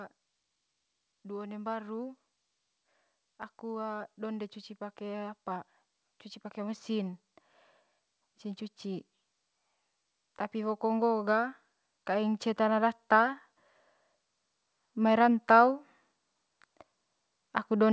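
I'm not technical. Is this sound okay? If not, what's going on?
No. From about 10.5 to 13.4 seconds there's an automatic gain rising: the call's volume control decided things were too quiet and slowly turned itself up, so the speech and the background noise both swell louder together over those few seconds.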